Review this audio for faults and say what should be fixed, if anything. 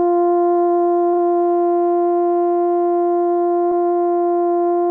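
Repeated frames occur twice in this music: a 40 ms block at 1.13 s plays two extra times, adding 80 ms, and a 100 ms block at 3.71 s plays once more, adding 100 ms. Compressed frames were duplicated, so the decoder replays that slice, heard as a stutter. On a spectrogram, identical slices sit side by side with a vertical seam where each copy restarts. To prevent it, make sure the encoder or transport writes each frame exactly once, dropping duplicates by sequence number.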